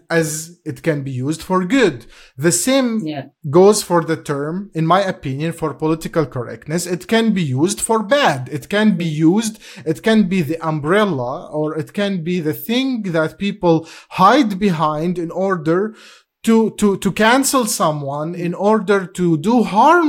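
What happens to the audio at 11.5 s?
At 11.5 s the speech carries clock slip clicks, small ticks every half second from 0.15 to 20.06 s, likely unsynchronised clocks dropping or repeating one sample. Their steady spacing sets them apart from random clicks.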